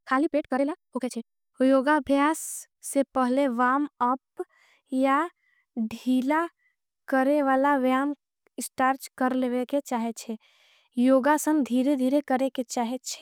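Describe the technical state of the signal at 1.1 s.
At 1.1 s you're inside a time-stretched section that runs from the start to about 1.54 s. The speech is played at roughly 1.93 times normal pace with the pitch held steady, likely from software dropping short chunks to squeeze it, so it sounds rushed.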